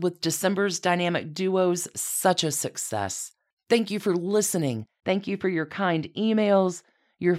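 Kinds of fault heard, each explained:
De-emphasis applied wrongly: from 4.77 s to the end at 7.38 s, the speech turns dull and muffled, as if a blanket had been thrown over it. A treble-cut filter meant to reverse high-frequency boost was applied to audio that had no such boost, or was applied twice. The result is a smooth downward slope in the response, leaving 10 kHz about 14 dB below 1 kHz, so sibilants and consonant edges lose their crispness while the lower body of the speech stays intact.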